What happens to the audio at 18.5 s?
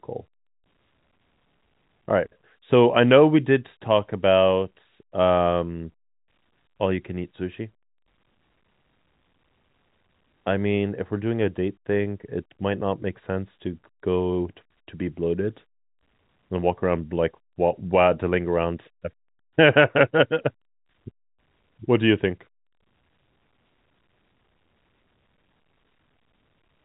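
Nothing goes wrong at 18.5 s: the speech carries on intact through that moment, with only the steady telephone-band sound of G.711 coding, which passes nothing above about 3.9 kHz.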